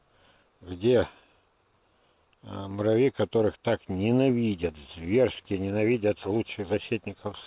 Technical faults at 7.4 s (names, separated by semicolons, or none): none